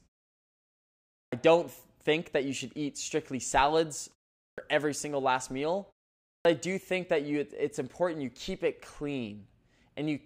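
Speech snaps in abruptly without its first sounds at 1.26 s on "don't think that you", at 4.52 s on "every single last meal", and at 6.39 s on "I do think that", each losing about 60 ms. This clipped start after a pause comes from the output device sleeping through the preceding silence and waking too late.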